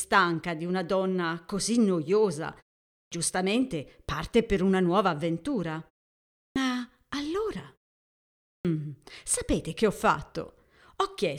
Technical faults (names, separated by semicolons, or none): clipped start after a pause